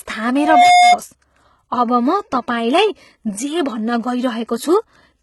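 From the start, the speech sounds heavily coded. Nothing is present above 11.8 kHz. The treble is present but not quite true. S sounds come across gritty and lispy, with a metallic edge. This points to HE-AAC compression as the likely cause. The codec keeps the lower spectrum and rebuilds the highs by copying lower bands upward, so harmonics fail to line up. The heavy damage fits a low bitrate, around 16 kbps.

At 0.38 s a loudspeaker feedback squeal begins. A single tone at 716 Hz swells up over roughly a third of a second. It rises to about 10 dB above the speech. It stops at 0.99 s. The microphone was picking up the loudspeaker it fed. At 716 Hz the loop gain exceeded one, so that frequency fed on itself and grew into a howl.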